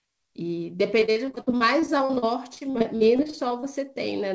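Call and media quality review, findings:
Choppy, robotic speech with chunks missing, 1.00–3.64 s. Repeated packet loss: frequent gaps up to 61 ms, each concealed by extending the prior audio, which covers roughly a quarter of the stretch. The audio is band-limited at 8 kHz, which fits a G.722 call path.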